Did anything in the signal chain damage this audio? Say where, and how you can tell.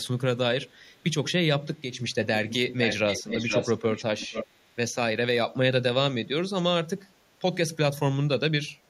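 Yes. From 1.74 to 1.99 s the level drops abruptly by about 6 dB and snaps back. That clean 6 dB step is what a mono sum does when one of two equal channels vanishes. A fade or gain dip would be gradual. This is likely a one channel drop-out in the analogue wiring or connector.

An echo leak appears at 2.49–2.55 s, 2.71–3.76 s and 3.93–4.47 s. It is a distinct copy of the speech trailing by 471 ms, about 10 dB down and nearer 5 dB down in the middle stretch. Room reverberation gives a smeared tail, but this fixed-delay repeat points to call processing, likely a far-end loudspeaker whose echo canceller let it through.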